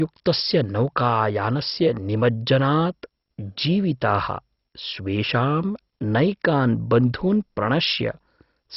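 Throughout the speech, nothing reaches above 5.6 kHz and the sound is dull, with a heavy gurgling, granular texture as upper bands flicker in and out. The likely cause is MP2 compression starved of bits, which fits a rate near 32 kbps.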